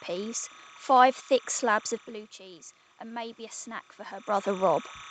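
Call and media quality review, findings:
Timecode bleed, whole clip: steady chirping warble near 1 and 2 kHz, roughly 25 dB under the speech. Pattern fits 29.97 fps linear timecode leaking from an adjacent track or cable, not a tonal hum.

Automatic gain rising, 2.37 to 4.76 s: AGC slowly adds about 6 dB after the input falls about 15 dB. Speech and room noise swell together, unlike the talker movements near 2 and 4 s, which change only the voice.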